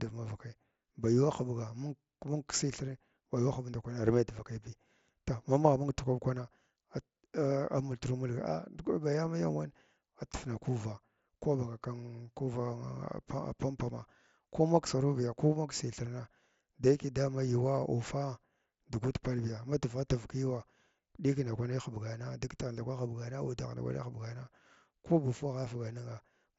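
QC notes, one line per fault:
The speech comes through a Bluetooth mSBC headset link that passes the band up to about 8 kHz, with only a light grainy texture on louder passages, and no faults are present.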